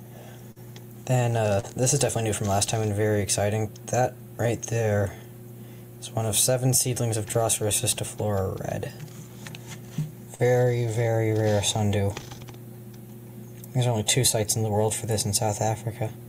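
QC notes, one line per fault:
0.51 s, 1.60 s, 10.35 s: short concealed packet loss. About 40 ms of audio arrived too late each time, so the receiver extended the preceding sound for 30 to 45 ms before crossfading back, leaving a brief smear or wobble where the original detail vanished.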